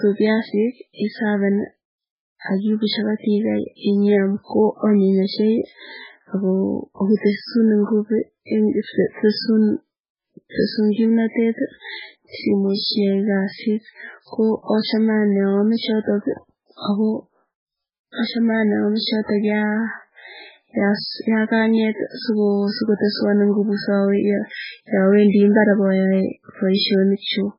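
Throughout the speech the treble stops dead at 5.3 kHz, and the remaining band sounds watery and swirly, with chirping on s sounds and smeared onsets. This is likely heavy MP3 compression, where weak frequency lines drop in and out between frames, consistent with a very low bitrate around 8 kbps.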